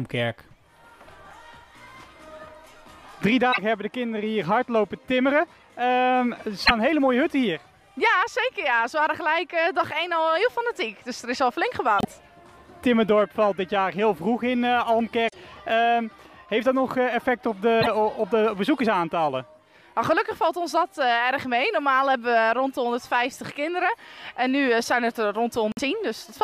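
Broken MP3 bit reservoir at 3.52, 6.65, 11.98, 15.27, 17.80 and 25.72 s: each is a 70 ms glitch where the audio jumps ahead, likely because frames went missing and the following frames took their borrowed data from the wrong bytes.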